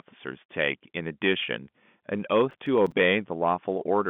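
A speech recording carried over a narrowband telephone path, with nothing above about 3.7 kHz, breaks into a gritty, tearing crackle from 2.51 to 2.92 s, where a run of tiny hard-edged silent gaps chops the sound. This is processor overload crackle: the processor fell behind and missed several audio buffer deadlines in a row, each miss leaving a brief hole. The gaps fit a buffer of around 5 ms.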